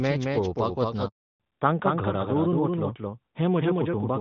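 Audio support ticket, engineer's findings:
Doubled audio track, throughout. A second full-band copy trails by roughly 200 ms, about 5 dB down, with no decay or room colour. Likely cause: a slower second capture path, or an edit leaving two copies out of step.

Handover gap, 1.08 to 1.40 s, right after "मॅच पळोवपाक वतना". Speech dies within tens of milliseconds, then 320 ms of silence. Network handover with no speech frames delivered during the switch, so content in that span is lost.

Fallback to narrowband, 1.40 s to end. Content above 4 kHz is gone, and speech turns duller and rougher. The call dropped from AMR-WB HD Voice at 12.65 kbit/s, which is clear before the gap, to AMR-NB at 12.2 kbit/s.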